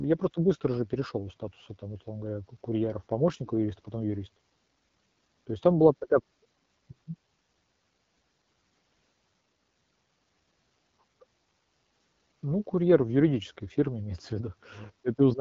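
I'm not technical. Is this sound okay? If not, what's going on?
No. Throughout the whole clip the speech sounds rough and raspy, with a dull top end and nothing above about 7.6 kHz. This comes from the AMR wideband (HD Voice) codec, the phone-call compression system, running at one of its lowest quality settings.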